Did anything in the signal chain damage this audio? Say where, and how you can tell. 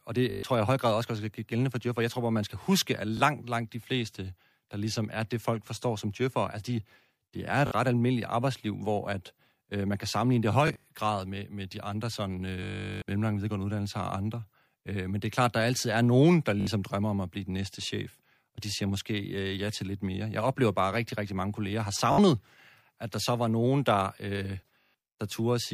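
Yes. The wireless link shows Bluetooth stutter at 0.31–0.43, 3.17–3.20, 7.67–7.71 (before "ret almindeligt arbejdsliv hvor"), 10.68–10.84, 12.63–13.02 (between "med de andre sådan" and "mellemlange videregående uddannelser og"), 16.61–16.67, 22.12–22.18 (after "rigtig mange kolleger har") and 24.80–24.85 s. Each spot stutters as the receiver replays its last short buffer while packets are missing, then the speech resumes further on. The longest run, about 0.39 s, fits many consecutive lost packets.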